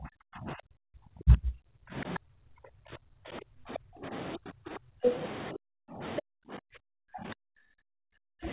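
Speech suppressed in double talk runs from 0 to 4.12 s, again at 4.36 to 5.08 s and 5.52 to 6.02 s, and from 6.2 s to the end of the speech clip. The voice dips by up to roughly 40 dB or breaks into pieces, likely because the echo canceller could not separate the talker from loudspeaker echo and attenuated both. The other side's voice leaking through appears at 2.14 to 2.19 s and 3.75 to 3.79 s, about 5 dB below the talker, and at 6.16 to 6.22 s at roughly equal level. These are short scraps of a second voice, likely loudspeaker playback that the echo canceller failed to remove from the microphone signal.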